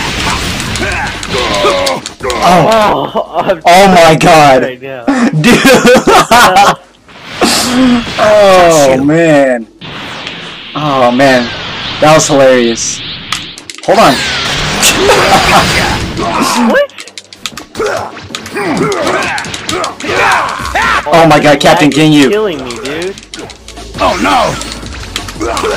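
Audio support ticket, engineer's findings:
Harsh fuzz on every loud passage, flat-topped peaks, full length of clip. Hard clipping: input driven about 14 dB past the stage's ceiling, so about a tenth of samples are cut flat. Check gain staging before converter.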